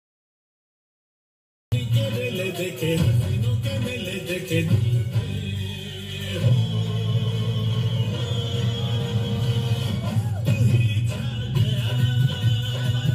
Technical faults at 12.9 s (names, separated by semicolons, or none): none